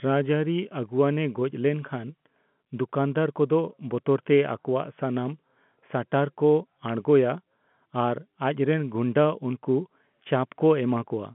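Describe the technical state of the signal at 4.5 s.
At 4.5 s the signal is intact, with the speech carried through ordinary G.711 telephone coding that keeps it within a band of about 150 Hz to 3.4 kHz.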